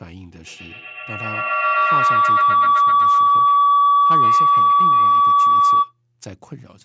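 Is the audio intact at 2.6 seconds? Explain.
No. A feedback howl runs from 0.33 s to 6.01 s, so 2.6 s falls inside it. Two devices in the same room feed each other, and each pass from microphone to loudspeaker and back comes out louder. The repeats build rather than decay and narrow to the frequency the loop favours, leaving a ringing tone around 1 kHz, with the loop coming round roughly every tenth of a second, that peaks about 17 dB above the speech.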